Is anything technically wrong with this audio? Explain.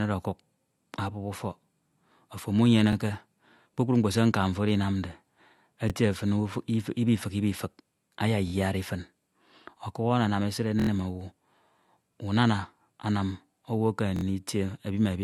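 Yes. The speech is likely low-bitrate audio saved at a high bitrate: the MP3 is high-rate yet nothing exists above 12.2 kHz, a ceiling from an earlier codec that re-encoding cannot restore.

Repeated buffer stutters occur at 2.93–2.95 s and 5.90–5.92 s (one extra play each), 8.48–8.52 s (two), 10.80–10.89 s (four), and 14.16–14.23 s just after "unana anam owu ekeme" (three). Each replays a 23 ms slice, which fits a 1024-sample buffer, with hard joins. Unlike a dropout, there is no silence and nothing is skipped.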